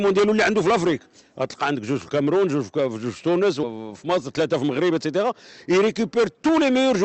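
At 3.63 to 3.65 s there is a skip ahead. About a second of audio was dropped, and playback jumps straight across with no filled gap. From 4.27 to 4.90 s comes a jitter buffer speed-up. Around 50 ms of pitch-period pieces were cut to shrink the delay, so the sound runs about 6% fast at unchanged pitch. Throughout, the Opus call path limits the top end near 8 kHz.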